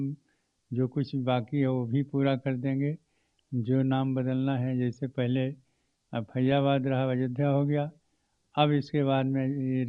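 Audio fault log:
6.52 to 6.58 s, DAB burbling: weak reception let bit errors slip past the error correction into the MP2 audio data, at a bit error rate somewhere around a fifth of a percent, and the burst fits roughly nine corrupted frames. Wrong samples put short blips of noise in single sub-bands and wrong scale factors throw individual sub-bands up or down in level for up to a frame, so for this short stretch the sound burbles over the programme.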